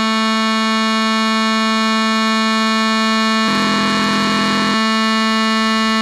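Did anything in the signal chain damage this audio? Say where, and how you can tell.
Yes. From 3.46 s to 4.75 s the music carries a steady buzz at about 43.1 Hz and slows to 0.938 of its normal speed while keeping roughly its pitch. That points to a block size mismatch (padded) at the driver or buffer stage. One stage hands over shorter blocks than the next reads, which fits a 1024-sample read, and each block's shortfall is zero-filled. The periodic gaps cause the buzz and stretch the timing.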